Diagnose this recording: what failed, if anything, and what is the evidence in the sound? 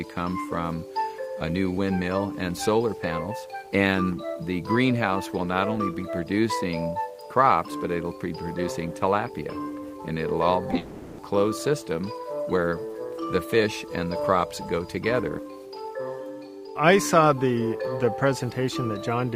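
The network stage dropped packets, and the receiver's concealment covered the holes. Three short concealed packet losses fall in quick succession: 10.71 to 10.73 s, 10.74 to 10.76 s and 10.76 to 10.78 s. In each, about 10 ms of audio never arrived in time. The decoder extended the preceding sound, following its pitch or as shaped noise, then crossfaded back to real audio. Each shows up as a brief smear or wobble.

That burst runs straight into a long network dropout, likely caused by a congested or interrupted link, since nothing arrived for an extended stretch. From 10.78 to 11.19 s, 400 ms of audio is missing, and concealment synthesised the entire gap rather than falling to silence. The sound there is an artificial buzzy or hissy continuation of the last material. When real audio returns at 11.19 s, it picks up further along, and the missing portion is gone for good.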